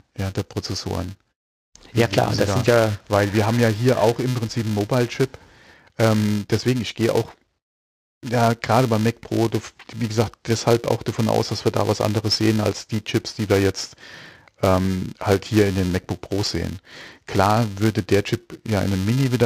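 From start to finish the speech carries a steady buzz at 375 Hz, the signature of a filter restarted on every block. The filter discards its internal state at each block boundary and begins again from silence, so every block opens with a small transient. Those ticks repeat 375 times a second, which fits a 128-sample block, and they fuse into a buzz that grows louder and softer with the level of the speech.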